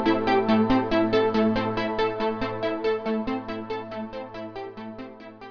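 No technical faults can be heard anywhere in this audio.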